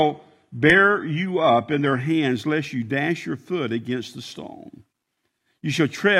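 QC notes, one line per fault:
0.0–2.0 s adaptive stream starting at a low bitrate: dull, synthetic-sounding treble with stronger codec artefacts, like a roughly 16 kbit/s HE-AAC rendition, then a sudden, gapless step up to 96 kbit/s AAC-LC quality.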